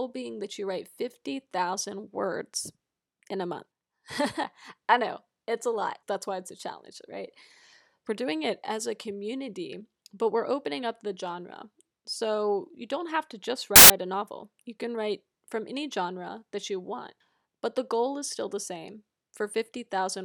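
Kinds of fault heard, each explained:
File tags played as audio: part of the file's metadata, here the compressed data of an embedded cover picture, was decoded as if it were sound, so about 0.14 s of very loud white noise bursts in at 13.76 s, between "don't have to just" and "a novel you can". Unlike a codec glitch or clipping, it has no tie to the speech underneath: flat, very loud static with abrupt edges, replacing the audio outright.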